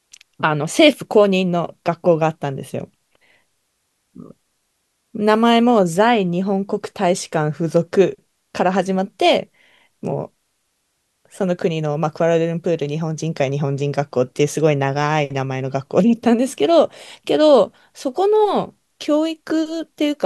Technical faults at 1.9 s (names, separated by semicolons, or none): none